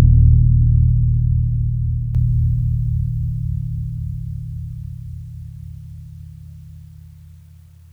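At 2.15 s the digital gain likely steps up by about 7 dB from one sample to the next, with no ramp. The sudden gain jump lifts the music and its background noise together, and that louder level holds to the end.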